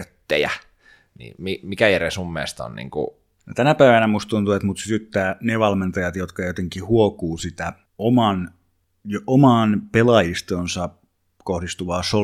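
Nothing stood out as a technical problem on listening to this speech recording.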